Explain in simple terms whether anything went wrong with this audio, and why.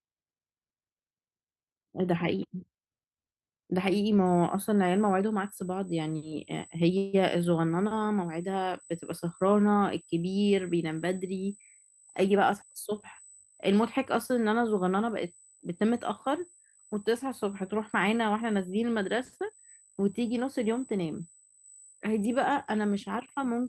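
Three separate problems show up in this speech recording.

From 4.26 s to the end, a thin, steady high-pitched tone sits under the sound at 8 kHz. This is USB whine. A USB device's data traffic runs in tiny fixed time slices, and the electrical ripple they cause leaks into the audio through the power or ground wiring. Because those slices repeat at an exact rate, the tone stays at one pitch throughout, fairly faint.

At 6.97 s the sound stalls for about 0.16 s. The last bit of audio is stretched into a short fading buzz or hiss instead of going silent, and then the speech carries on from exactly where it stopped. This is a call audio freeze, likely caused by network packets arriving late so the receiving end ran out of audio to play. Nothing is lost, but everything after that point is pushed later by that 158 ms pause.

From 20.98 s to 21.64 s the speech runs about 10% faster without any change in pitch, so it sounds briefly rushed. 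This is a jitter buffer speed-up. The receiver had more audio stored than it wanted, as happens when delayed packets arrive in a bunch. It trimmed out many tiny slices of the sound, roughly 70 ms in total, to catch up and reduce the delay.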